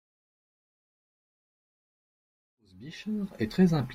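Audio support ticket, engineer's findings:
Nothing stood out on listening to the speech, including the smooth fade-in that runs from around 2.5 s to 3.78 s.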